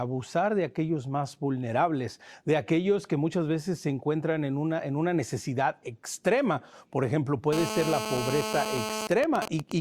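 From 7.53 to 9.07 s a hard, raspy buzz at 217 Hz, thick with harmonics, sits over the speech at about -5 dB relative to it, holding steady throughout. This is GSM phone buzz: a nearby 2G phone in a call transmits in bursts 217 times a second, and the audio circuit rectifies those radio pulses into audible noise.

From 9.11 to 9.72 s the steady buzz gives way to even ticks with a longer 217 Hz buzz twice a second, at a roughly similar level. These are GSM signalling bursts, sent while the phone's user falls silent during the call. The phone transmits only short groups of bursts, which the audio circuit again rectifies.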